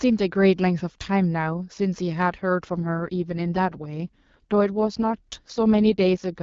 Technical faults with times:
2.72-6.30 AMR rate drop

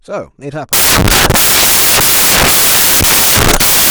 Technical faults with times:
0.73-3.90 samples built from the wrong bytes

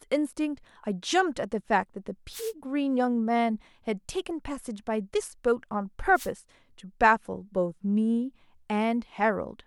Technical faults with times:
2.31-2.53 wireless microphone noise hit
6.13-6.30 wireless microphone noise hit

